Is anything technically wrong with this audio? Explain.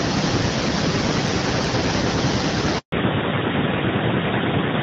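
Yes, there are three faults in this speech clip.

Echo with no canceller runs throughout. The far end's loudspeaker feeds its microphone and nothing subtracts it, so the speech returns after the network round trip, roughly four tenths of a second later and about 10 dB quieter, as a thinner shadow.

A handover gap sits at 2.78 to 2.92 s. The call was switched between networks and no speech frames arrived for 140 ms, so the sound cuts away abruptly and stays silent until the new link delivers audio again.

Fallback to narrowband begins at 2.92 s and lasts to the end. The call dropped from HD Voice to an older narrowband codec. Nothing above 4 kHz survives, so the speech becomes duller and rougher than the wideband section before it, which sounds like a mid-rate AMR-WB stream.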